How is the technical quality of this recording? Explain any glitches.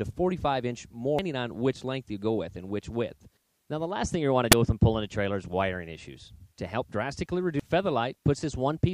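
Technical quality is compromised by damaged data in a compressed stream, heard three times: brief blips at 1.19 s and 7.60 s, and a longer disturbance from 4.16 to 4.53 s. In each case part of the encoded stream is corrupt, so the decoder misreads or discards those frames, loses sync and hunts for the next valid frame header. The result is a short chirp or squawk, drawn out across the middle event.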